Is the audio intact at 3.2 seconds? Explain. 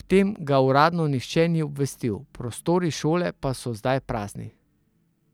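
Yes, the speech at 3.2 seconds is intact, with no dropout, click, distortion or other fault at that moment.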